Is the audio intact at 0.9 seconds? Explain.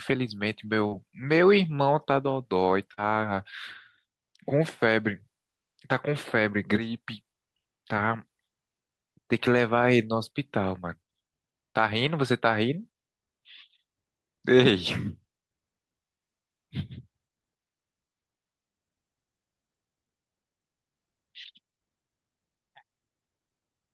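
No. Short concealed packet loss covers 0.87 to 0.93 s. About 40 ms of the speech never arrived in time. The receiver filled the hole by extending the preceding sound, then blended back. This is heard as a brief smear or wobble.

Within that span, from 0.91 to 0.93 s, a lost packet is rebuilt from error correction. The next packet carried a low-bitrate copy of those 20 ms, which fits a single lost packet. The decoder played that copy, so there is no gap, but the sound turns rougher and noisier.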